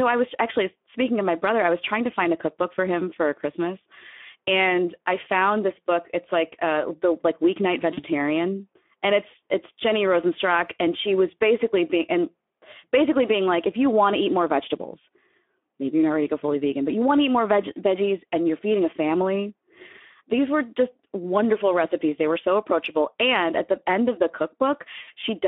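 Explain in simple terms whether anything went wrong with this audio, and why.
Speex codec, throughout the speech: squeezing the voice into few bits makes it hoarse and noisy, and the narrow line leaves nothing above 3.5 kHz or below 250 Hz.

VoIP packet loss concealed by the speech codec, at 7.93–8.03 s right after "uh the like weeknight", and at 25.01–25.08 s: about 40 ms and then 60 ms of audio went missing, and the decoder filled each gap by stretching the last sound out and letting it fade, so the voice sounds briefly smeared.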